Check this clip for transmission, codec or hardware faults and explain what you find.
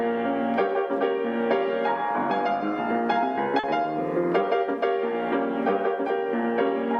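One transmission fault is present, a short concealed packet loss at 3.59 to 3.65 s. About 40 ms of audio failed to reach the decoder in time, so the receiver synthesised a replacement by extending the preceding sound and then crossfading into the returning stream. It comes across as a brief smear or wobble.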